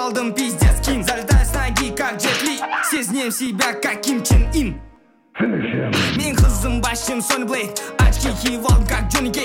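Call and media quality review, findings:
Periodic USB or driver dropouts, 2.47 to 6.46 s. Symptom: regular ticks every 0.5 s, about ten in all, audible only over signal. Component: USB bus or audio driver. Mechanism: a recurring background task stalls the stream. Each time, well under a millisecond of audio is skipped outright, not filled with silence. The resulting discontinuity clicks.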